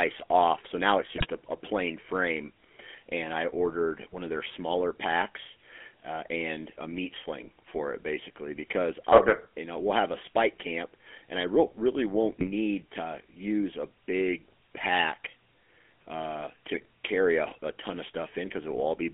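Across the whole recording the speech carries the buzzy, gravelly texture of the GSM full-rate codec, which fits a 13 kbps stream. The coarse pulse-driven excitation roughens the voice, and the band sits between 250 Hz and 3.4 kHz, so nothing above 3.4 kHz comes through.

GSM bit errors break in three times. The first runs from 1.16 to 1.26 s, after "off so now it's" and before "a a plain frame". The second runs from 12.40 to 12.47 s, between "really won't" and "to use a big". The third runs from 16.74 to 16.85 s, ending just before "carry a a ton". Corrupted filter, pitch and gain parameters distort the spectrum and level of the affected frames, producing short squawks, pops and gargling.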